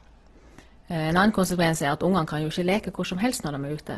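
A speech clip that sounds rough, grainy and noisy throughout, with nothing above about 12.1 kHz. This is likely heavy Opus compression in its music (CELT) mode, which fills starved bands with folded or noise energy, consistent with roughly 12 kbps.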